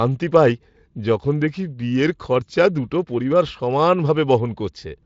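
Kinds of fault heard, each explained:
No kinds of fault are heard in this speech clip.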